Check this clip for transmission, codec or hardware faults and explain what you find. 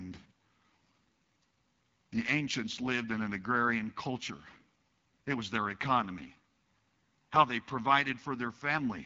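The speech carries one fault from start to finish: the AMR wideband (HD Voice) codec, running at a low rate. The audible roughness fits the 8.85 kbit/s mode. The codec models speech as pulses through a vocal-tract filter up to 6.4 kHz and pads the top with shaped noise. Starved of bits here, that model leaves the speech plainly rough and raspy, with nothing above 7.5 kHz.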